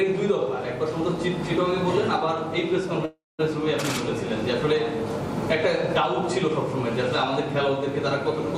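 At 3.05 s the sound stalls into a fading buzz that drops to silence for about 0.21 s, then resumes at 3.41 s exactly where it left off, now a third of a second late. This call audio freeze likely came from delayed packets emptying the jitter buffer.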